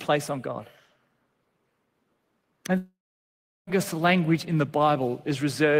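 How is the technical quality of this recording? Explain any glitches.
The recording has one clear glitch, a gap in the speech from 2.77 s to 3.70 s. At 2.77 s the last sound smears into a short buzzy hiss that fades away, leaving roughly three quarters of a second of near silence. The talker resumes at "language in the" with about 0.9 s of speech simply missing. This is likely a long network dropout: no audio reached the receiver, which stretched the final sound briefly before giving up, then carried on without the lost stretch.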